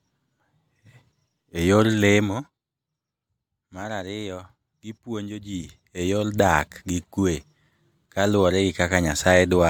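Nothing stood out on listening to the speech here; no technical faults could be heard at any point.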